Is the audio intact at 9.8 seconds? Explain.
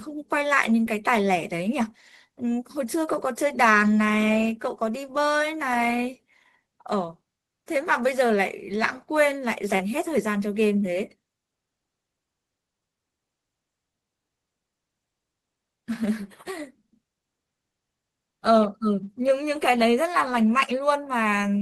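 No. Short concealed packet loss at 9.75–9.82 s: about 40 ms never arrived, and the decoder extended the preceding sound to cover it, giving a brief smear rather than a silent dropout.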